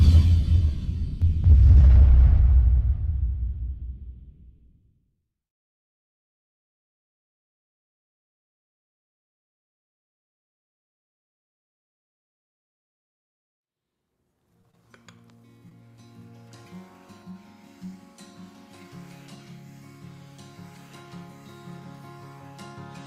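From about 1.52 to 2.2 s there's mild hard clipping. Peaks run about 2 dB past what the stage can pass, so they're flattened into a light crackle. Then at 14.61, 14.71 and 15.69 s, short concealed packet loss fills roughly 20 ms gaps by extending the preceding sound, leaving brief smeary wobbles.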